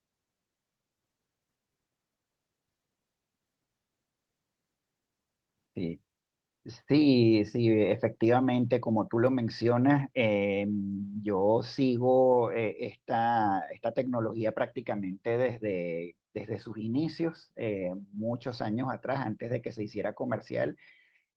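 A speech clip with one fault. At 8.25 s the microphone volume is stepped down: voice and background drop together by about 2 dB, likely the call software lowering input gain.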